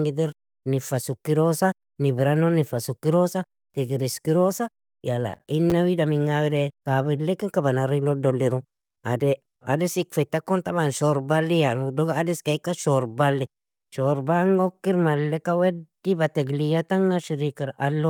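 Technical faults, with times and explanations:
5.34–5.72 s: processor overload crackle. Several roughly 10 ms buffers missed their deadlines and were replaced by hard-edged silent gaps, which together sound like gritty crackling over the speech.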